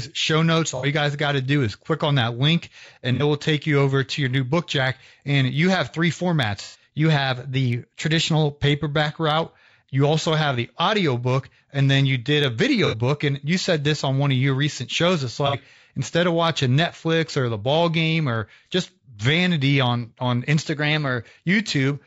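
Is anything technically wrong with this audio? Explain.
Yes. The speech carries several technical faults.

Throughout the clip there is low-delay AAC compression. The voice sounds rough and grainy. Noise fills the gaps between harmonics, and the top band sounds thin and synthetic. This is likely AAC-ELD, the low-delay codec used in video calls. Its short frames resolve pitch harmonics poorly. The damage is plainly audible, which fits a low bitrate of about 32 kbps.

AAC frame loss with concealment occurs five times. The first comes at 0.77 to 0.86 s, just after "show notes" and before "you guys got to". The others fall at 3.14 to 3.23 s, 6.62 to 6.82 s, 12.86 to 12.96 s, and 15.47 to 15.56 s, the last just before "instead of watching". The decoder lost audio and rebuilt it from the last good spectrum. Each gap sounds like a brief smeared, noisy, phasey patch. Most cover about 60 ms, which fits two frames. 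The one at 6.62 s covers about 120 ms.

A drift correction step happens twice. The first runs from 6.99 to 8.45 s, between "you have three formats" and "paperback route you also". The second runs from 20.62 to 21.26 s. Each time, speed rises by 5.6 percent. Pitch rises by about 94 cents, close to a semitone. The likely cause is clock-matching software changing the playback rate in one jump to rebalance its buffer.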